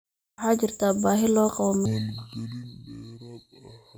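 From 1.86 s, after "baahi loo qabo", a section at the wrong speed plays at 0.555x, likely from a clock mismatch. Tempo and pitch sink together, about ten semitones lower.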